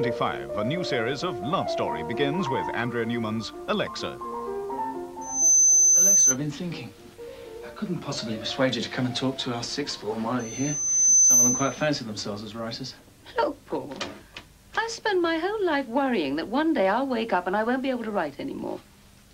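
A piercing tone near 6.1 kHz swells up from 5.21 to 6.37 s within a fraction of a second, and again from 10.39 to 11.87 s over closer to a second, peaking well above the surrounding audio. It is loudspeaker feedback squeal: the microphone picks up its own loudspeaker, and the loop's gain exceeds one at that frequency.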